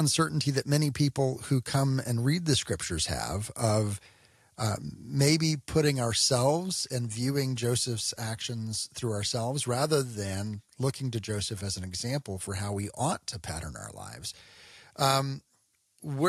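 At 6.69 s the speech and the background beneath it drop together in level by about 2 dB in one instant step, and the lower level then holds. This is a microphone volume stepped down, likely the call software cutting the device's input volume after judging it too hot. Unlike a gradual fade or a compressor pumping on loud syllables, the change is a single sharp step that never recovers between phrases.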